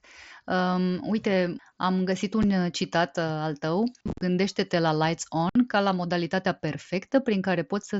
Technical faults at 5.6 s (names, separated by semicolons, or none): unconcealed Bluetooth headset packet loss